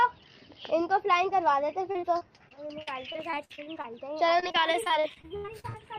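The audio has repeated packet loss (robotic sound) in two stretches, 1.91 to 3.86 s and 4.40 to 5.76 s. Short holes come one after another, and each is patched by stretching the last sound. The first stretch has about a dozen gaps totalling 0.3 s, the longest 48 ms. The second is worse: more gaps, 0.4 s in total, up to 78 ms, and about 30% of the stretch is concealed. The result is choppy, with pieces missing.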